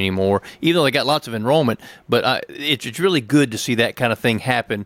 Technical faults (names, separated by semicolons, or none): none